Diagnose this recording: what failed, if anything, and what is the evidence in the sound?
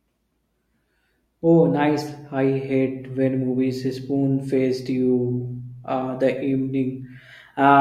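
Nothing stood out on listening to this speech recording that would point to a failure at any stage of the chain.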